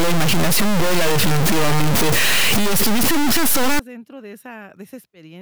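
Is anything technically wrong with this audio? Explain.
Yes. From the start to about 3.79 s, just before "dentro de", there's harsh, buzzy distortion with noisy pauses, a step around -10 dBFS. That's likely a stuck bit, corrupting half the sample values.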